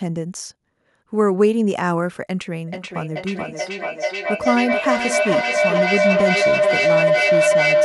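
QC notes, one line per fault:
2.68 s to the end: feedback howl. A tone of roughly 700 Hz swells out of the speech and keeps climbing, pulsing about every 400 ms, and peaks at about 4 dB above the talker. Two devices sharing the call in one room form a microphone-to-loudspeaker loop with gain above unity, so each trip around it reinforces the previous one. The repeats grow rather than decay, narrowing onto the frequency the loop favours and throbbing at its delay. It never breaks before the audio ends.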